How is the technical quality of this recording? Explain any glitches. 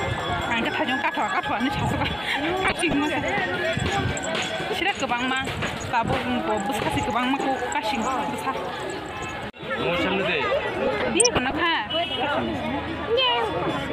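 The recording has two bursts of DAB burbling. The first runs from 2.63 to 2.94 s, the second from 10.87 to 11.53 s. Under weak reception, bit errors below one percent slip past error correction and corrupt MP2 samples and scale factors. Single sub-bands jump in level or carry short blips of noise.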